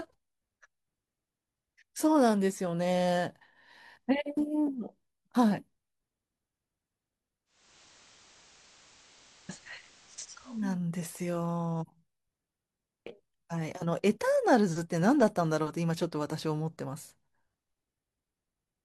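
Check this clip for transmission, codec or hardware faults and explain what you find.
One fault: digital radio blending to analogue. From 7.45 to 10.79 s the receiver lost digital reception and cross-faded over 351 ms to FM, so hiss rises and level shifts about 1 dB.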